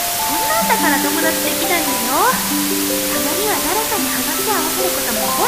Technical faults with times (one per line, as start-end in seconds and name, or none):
0.00-5.47 low bit depth with dither